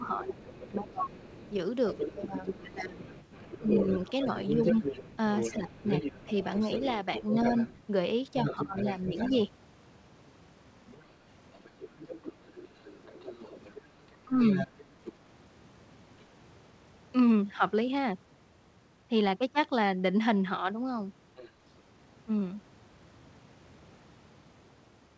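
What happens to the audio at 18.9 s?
Nothing goes wrong at 18.9 s: the speech carries on intact through the call path, with its content stopping at 8 kHz as the G.722 codec leaves it.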